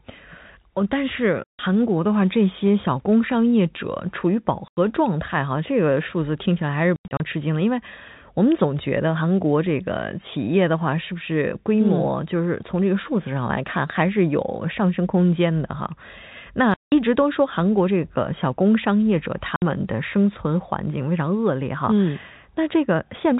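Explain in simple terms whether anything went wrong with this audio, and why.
The speech drops out in five places because of packet loss filled with silence. The audio travelled in small chunks, and when some failed to arrive, the receiver played nothing in their place. Gaps fall at 1.45–1.59 s, 4.68–4.77 s, 6.96–7.20 s (several short holes), 16.74–16.92 s and 19.56–19.62 s. They last 60 to 180 ms, all steps of 30 ms, which fits 30 ms packets. Each hole starts and stops abruptly. The telephone-style G.711 coding underneath is simply narrow-band.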